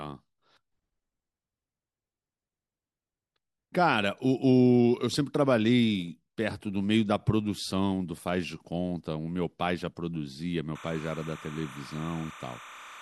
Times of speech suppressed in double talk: none

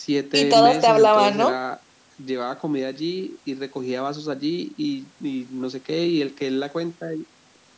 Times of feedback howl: none

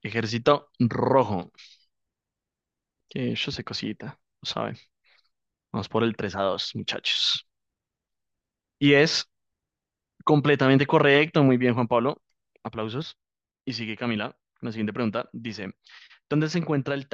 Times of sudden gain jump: 13.02-17.13

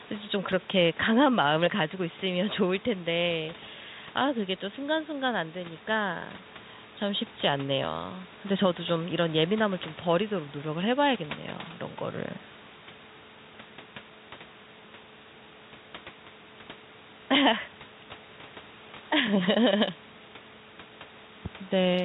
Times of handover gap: none

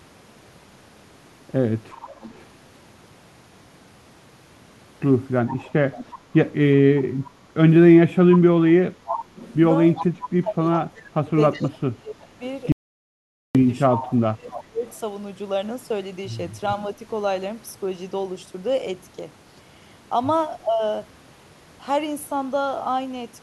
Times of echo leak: 2.05-2.43, 5.48-6.12, 9.36-12.47, 14.04-14.92

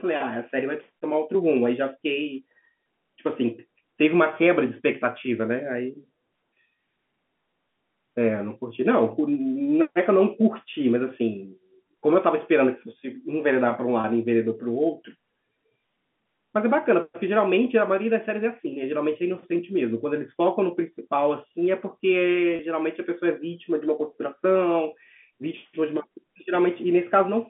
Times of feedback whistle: none

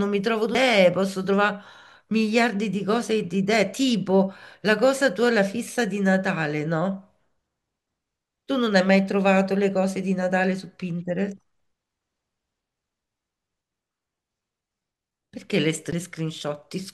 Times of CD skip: 0.55, 15.91

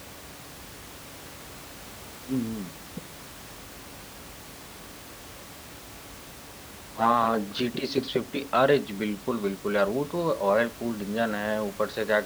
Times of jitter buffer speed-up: none

